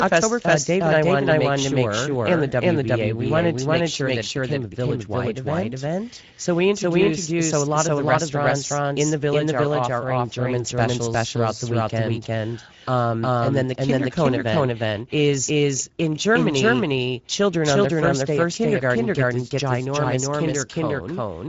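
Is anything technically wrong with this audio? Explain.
Yes. Two faults run through the whole speech clip.

Doubled audio track: From start to end, a second full-band copy of the speech trails the original by roughly 0.4 s at about the same level. It has no reverberant tail or room colouring, so it sounds like a hard, clean repeat rather than an echo. Each syllable is restated a beat later on top of the following speech, smearing consonants and rhythm. The likely cause is the same signal being captured twice, once through a slower path.

Speex codec: Across the whole clip the speech carries plainly audible Speex coding damage. This CELP codec models speech with a limited excitation budget, so the voice comes out noisy and hoarse. Content stops at about 7.7 kHz, which points to wideband Speex at a mid rate, around 16.8 kbps. The upper band sounds like a shaped noise fill rather than real harmonic detail, giving sibilants a hissy, flat quality.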